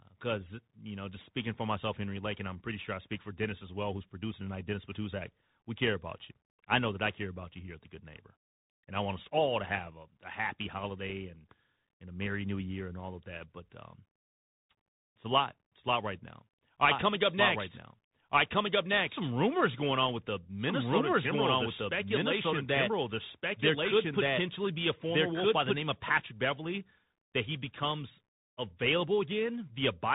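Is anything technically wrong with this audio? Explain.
Yes, there are two problems. The whole speech clip has passed through a Bluetooth CVSD headset codec. This narrowband scheme codes each sample as a single up-or-down bit at a high rate, which fits a 64 kbps link, and it adjusts its step size as it goes. Nothing above 3.8 kHz survives, so the speech sounds muffled and boxy. Loud, fast-rising sounds outpace the step, and s sounds turn scratchy over a grainy hiss. A spectrogram shows a hard ceiling near 3.8 kHz with fine speckled noise beneath it.

From 16.91 s to 25.77 s there is a doubled audio track. A second full-band copy of the speech runs about a second and a half behind the first, at roughly the same loudness, so two overlapping streams are heard at once. The likely cause is the audio being captured twice, once by a slower path. The copy has no reverb tail, and it begins and ends abruptly. 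On the waveform, repeated envelope shapes appear offset by the delay. On the spectrogram, the same patterns are stacked in time.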